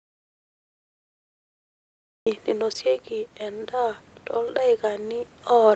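From the very start until 2.26 s the speech is absent: an audio dropout to silence, likely an input lost while recording continued writing silence. The waveform sits at a dead-flat line and the spectrogram is blank, with no room tone, until sound cuts in abruptly.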